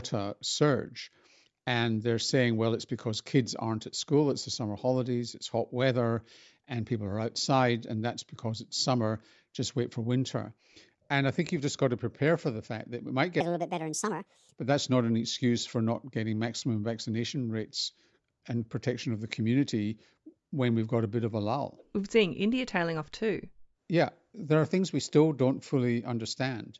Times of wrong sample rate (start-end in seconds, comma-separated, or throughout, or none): 13.41-14.56